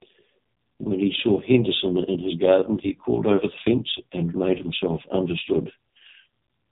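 Speech run through an AMR narrowband mobile codec for its whole length, and heavily damaged by it. Nothing survives above about 3.8 kHz, so the top of the spectrum is simply gone and sibilants lose their edge. The voice has a strong buzzy, synthetic quality, as the vocal-tract model with only a few excitation pulses per subframe fails to reproduce the natural waveform. That degree of coarseness fits the codec's lowest mode, around 4.75 kbps.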